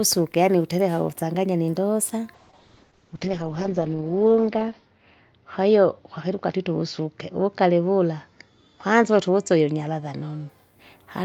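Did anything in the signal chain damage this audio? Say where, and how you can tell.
Yes: a call bitrate drop from 2.35 to 10.55 s. The codec stage starves the speech, dropping highs above roughly 8 kHz and adding roughness, which points to a fall from about 64 to 8 kbps.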